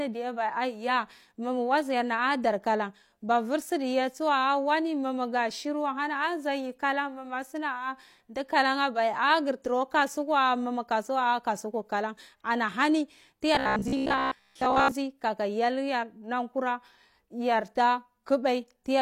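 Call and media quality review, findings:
Likely playout starvation, 13.55 to 14.91 s: new audio arriving too seldom, so the last short chunk is looped while most real audio is skipped. Repeat rate fits a 15 ms buffer. This is robotic sound from repeated short buffers: a rigid, metallic 66.8 Hz buzz over the speech.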